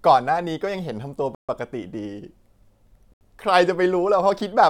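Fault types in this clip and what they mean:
Bluetooth stall: The speech cuts abruptly to silence twice, for about 138 ms from 1.35 s to 1.49 s and about 74 ms from 3.14 s to 3.21 s, then resumes without a fade. The likely cause is radio interference delaying packets on the wireless link, so the receiving buffer emptied and playback halted until retransmitted data arrived. The short, hard-edged gaps with clean restarts fit that buffer underrun pattern.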